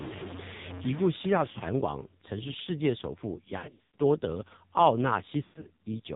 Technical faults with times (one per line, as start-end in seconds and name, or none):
0.00-6.16 AMR narrowband mobile codec
3.58-4.00 lost AMR speech frames
5.44-5.80 lost AMR speech frames